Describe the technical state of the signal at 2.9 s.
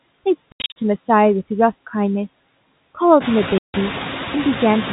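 At 2.9 s the background sinks between syllables and swells beneath them: noise suppressor artifacts, present throughout, pulling steady noise down by about 17 dB frame by frame, just as the room noise begins rising around 3 s.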